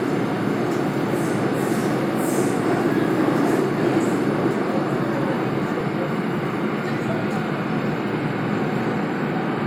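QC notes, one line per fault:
1.79 s and 5.81 s, overlapping chunks: at each join, 4.0 s apart, about 13 ms of audio repeats because each chunk starts early, giving a brief click-like stutter.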